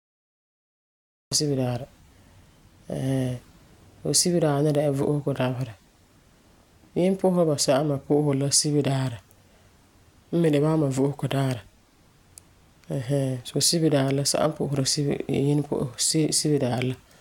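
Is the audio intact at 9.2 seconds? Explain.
Yes, the speech at 9.2 seconds plays through intact, with no fault at that moment.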